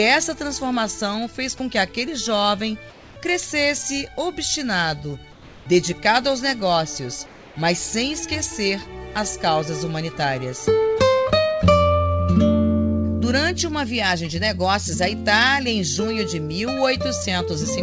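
At 2.90 to 3.16 s, 5.32 to 5.66 s and 7.26 to 7.56 s, the quiet background, sitting about 24 dB below the loud parts, turns into a flat, featureless hiss. It is about 4 dB quieter in the first gap and about 2 dB in the other two, then the real background returns. This is comfort noise in place of the background, likely from discontinuous transmission: the sender went silent during pauses and the receiver filled them with synthetic, roughly shaped noise. Throughout, nothing reaches above 8 kHz, which fits a G.722 call codec.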